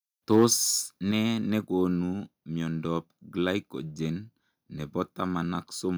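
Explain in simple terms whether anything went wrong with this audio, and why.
Between 0.32 and 0.45 seconds the speech turns harsh and crackly on its loudest moment. That is microphone overload: the input was likely set too high, so the tops of the loudest sound waves got sliced off, leaving a rough, gritty edge.

At 1.11 seconds the voice and the room sound both drop abruptly to a quieter level. This is a microphone volume step-down, likely the call software reacting to that earlier distorted peak by turning the microphone's input down in one quick step.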